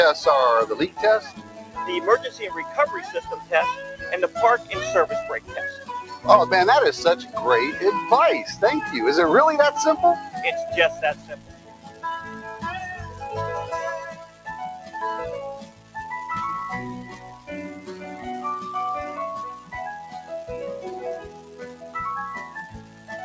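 From the start and through every pause, an unreliable data bit leaves a steady crackle. One marginal data line flips in random samples, drawing identical spikes on the waveform and vertical specks across the spectrogram.

Throughout, a noise suppressor applied to music or sounds treats held, steady material as noise. Levels swing by around 15 dB, so sustains and tails pump and thin while onsets pass, showing as a breathing envelope.

Sound cut by the noise suppressor occurs at 0.88–3.51 s (deepest about 12 dB), 5.4–6.26 s (about 10 dB), 11.14–12.47 s (about 11 dB), 14.12–14.94 s (about 11 dB), 15.59–15.96 s (about 12 dB), 17.05–17.96 s (about 10 dB), 19.56–20.31 s (about 10 dB), and from 21.18 s to the end (about 12 dB). In each stretch, sustained or decaying sound sinks or has its tail cut short while sudden sounds survive, seen as dimmed spectrogram bands and a clipped-off waveform decay.

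The call codec's band limit is visible as an empty spectrogram above 8 kHz.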